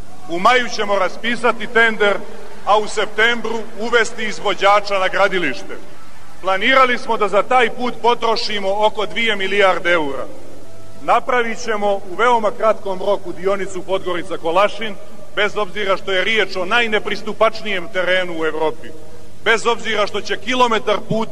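A brief stutter at 4.41 to 4.44 s and again at 17.81 to 17.84 s, where a 23.2 ms slice of sound plays twice in a row. These are repeated frames: a block of compressed data, consistent with a single frame, was written or sent twice, so the decoder plays the same moment again. Each repeat lengthens the audio by 23.2 ms, for 46.4 ms added in total.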